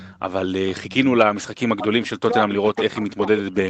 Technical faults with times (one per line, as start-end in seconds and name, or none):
0.00-0.20 echo leak
0.67-0.94 echo leak
1.78-2.07 echo leak
2.29-3.69 speech suppressed in double talk
2.49-3.42 echo leak